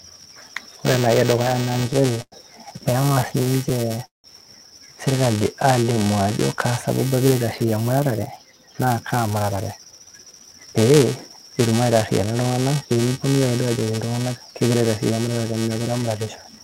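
Buffer tearing runs through the whole clip. Writer and reader cross each period, splicing in a small slice of audio about 10 ms old. This gives a 345 Hz buzz, which fits a 128-sample buffer.

Repeated stalls (stutter) hit from 1.49 to 2.34 s and from 3.02 to 4.26 s. The jitter buffer kept running dry. The receiver stretched the last sound to cover 185 ms and 295 ms. The longest wait was 182 ms, so the sound drags and stutters.

From 5.36 to 6.57 s comes a jitter buffer slow-down. The receiver repeated pitch periods to rebuild its reserve, adding 141 ms. Playback runs at 89% speed with the same pitch, drawn out.

From 8.38 to 12.01 s a jitter buffer speed-up follows. Too much audio was queued, so short pitch-period pieces were cut, roughly 400 ms in all. The sound plays at 110% speed and feels hurried.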